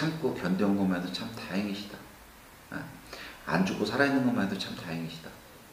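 No technical faults are audible.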